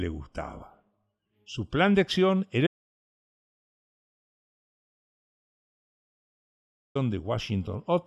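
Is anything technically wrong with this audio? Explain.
Yes. From 2.67 s to 6.95 s the speech suffers an audio dropout to silence. The input was likely lost while recording carried on writing silence, so for about 4.3 s the speech cuts out abruptly into total silence, with no room tone, then resumes mid-flow.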